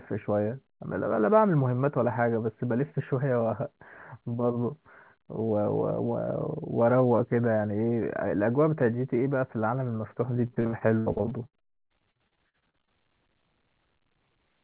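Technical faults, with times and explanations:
10.46–12.89 s, repeated packet loss (robotic sound): the speech turns choppy and mechanical, with about thirty short holes, the longest about 75 ms, so roughly a third of this stretch is patched rather than real. Packets kept going missing or arriving late, and each gap was bridged by stretching the preceding sound, which gives the buzzy, robotic texture. The dropouts sit on top of the narrowband call sound, with nothing above 4 kHz, consistent with a G.711-style codec.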